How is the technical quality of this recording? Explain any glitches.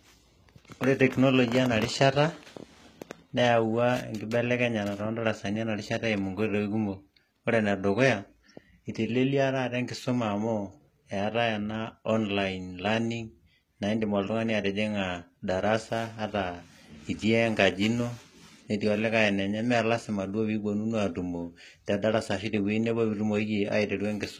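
The recording is noticeably degraded from start to finish. Across the whole speech clip, s sounds come out gritty and lispy, with a metallic sheen on the treble that sits loosely over the lower range. This is likely HE-AAC compression at a very low rate, consistent with about 20 kbps. Only the lower spectrum is properly coded, and the treble is rebuilt by copying lower bands upward under a coarse envelope, so the high harmonics fail to line up with the real ones.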